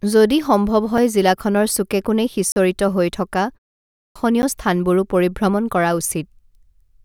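At 0.98 s the speech has a block of digital silence only about 3 ms long: the output cuts out and back with no fade, heard as a single tick. A longer block at 2.52 to 2.56 s removes 40 ms, enough to register as a brief hole. In both cases the output buffer was most likely not filled in time, so zeros went out in place of audio.

After a pause of 0.37 s, the speech resuming at 3.87 s shows a clipped start after a pause. The first 285 ms, up to 4.16 s, is swallowed because the output device had gone idle during the silence and needed time to wake and lock again. The speech therefore begins abruptly, already partway in.

A third block of digital silence at 4.42 s cuts out 10 ms and produces another sharp tick.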